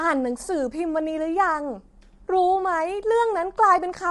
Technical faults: low-delay AAC compression

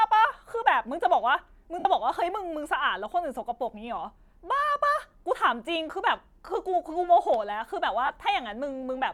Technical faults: lost LE Audio frames

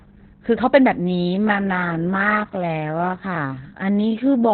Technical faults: Opus voice compression; time-stretched section

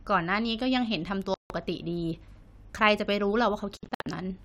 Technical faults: Bluetooth dropout

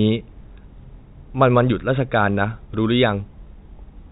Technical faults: none

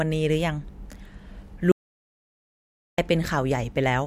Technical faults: audio dropout to silence

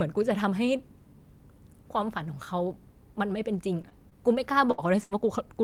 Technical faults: short concealed packet loss; burst of packet loss

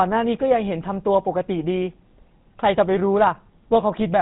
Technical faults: GSM full-rate codec

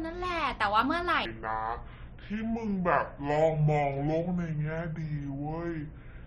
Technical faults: section at the wrong speed

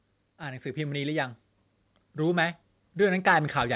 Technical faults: automatic gain rising

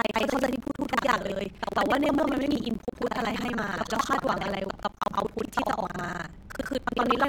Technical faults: buffer tearing; gap at a join of encoded pieces

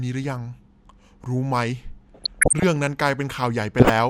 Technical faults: DAB burbling

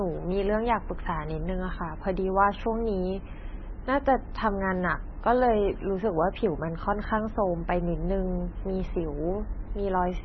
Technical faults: MP3 compression

